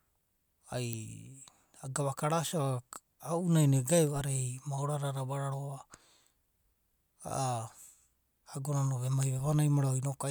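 Bit error spikes occur in this speech clip at 0.93, 4.07, 9.23 and 9.94 s, each a single sharp broadband tick peaking at about -12, -30, -18 and -30 dBFS. A flipped bit makes one to three samples leap by a power of two and snap back, independent of the speech.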